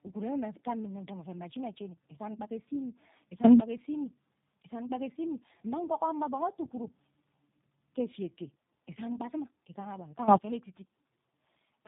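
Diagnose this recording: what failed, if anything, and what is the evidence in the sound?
Tandem speech coding at the codec stage runs through the whole clip. The speech sounds rough, muffled and warbly, with nothing above 3.8 kHz. The call passed through iLBC at 15.2 kbit/s, then G.711 A-law at 64 kbit/s, then G.729A at 8 kbit/s, so two low-rate speech codecs worked in series. The second coder had to model speech that the first had already smeared, and each codec's losses stacked on the previous one's.

There are two sudden gain jumps. The first runs from 3.44 to 3.6 s, right after "ghe esa imi", where speech and background noise together jump about 20 dB. The second, from 10.28 to 10.38 s, is a jump of about 18 dB. Because the noise floor moves with the speech in both cases, the change happened after capture, most likely a digital gain step in call processing applied instantly instead of ramped.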